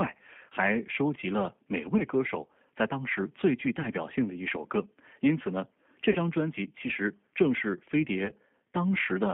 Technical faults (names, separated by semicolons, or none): G.729 codec; VoIP packet loss concealed by the speech codec